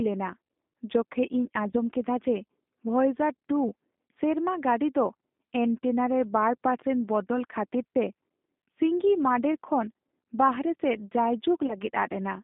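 Throughout this speech recording the sound is narrow, thin and slightly rough and synthetic, with nothing above about 3.6 kHz or below 200 Hz. That is the G.729 codec, an 8 kbit/s VoIP coder that rebuilds each frame from a vocal tract filter, a pitch predictor and a few pulses. Its damage is plainly audible. At 1.71 to 1.75 s, just before "ᱠᱮᱫᱟ ᱡᱮ", and again at 11.67 to 11.75 s, the sound briefly smears into a buzzy tone or coloured noise that fades, and then recovers weakly. These are VoIP packet loss concealed by the speech codec. Each gap fits a single lost packet of about 20 ms of audio, which the decoder filled by extending its last pitch and filter at falling gain.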